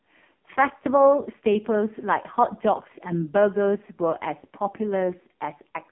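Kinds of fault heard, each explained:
AMR narrowband mobile codec: this is the old 2G/3G phone codec, which rebuilds speech from a vocal-tract model driven by a handful of pulses every few milliseconds. Here the whole clip sits in a telephone band of 200 Hz to 3.5 kHz, with nothing at all above 3.8 kHz. The damage is heavy: the speech sounds buzzy and synthetic, which fits one of the lowest AMR-NB modes, around 5 kbps.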